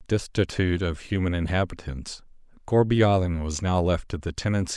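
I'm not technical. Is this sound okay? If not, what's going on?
Yes, this recording sounds fine; nothing is wrong here.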